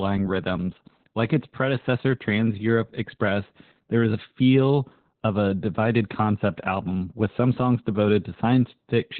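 Opus voice compression runs through the whole speech clip. The coder is working in its linear-prediction voice mode at narrowband, so nothing survives above about 4.5 kHz, and the excitation between predicted spectral shapes is coded very coarsely. The damage is heavy: speech sounds muffled and telephone-thin, with a hoarse, slightly robotic buzz. That points to a very low bitrate, around 8 kbps.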